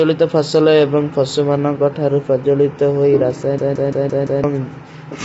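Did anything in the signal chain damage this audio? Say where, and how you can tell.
Yes. Throughout, the speech is rough and grainy with nothing above 7.7 kHz. The likely cause is low-delay AAC compression (AAC-ELD) at a low bitrate around 24 kbps.

From 3.58 to 4.44 s, a 171 ms fragment repeats five times as a 5.9 Hz stutter. This is a system hang loop, consistent with an 8192-sample buffer, and about a second of audio is lost.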